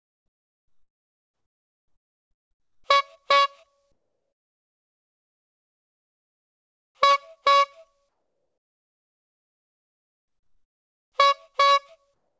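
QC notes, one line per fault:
12.14–12.39 s: comfort noise in place of the background. The faint background becomes steady, featureless hiss, about 6 dB quieter, likely synthesized by the receiver during discontinuous transmission.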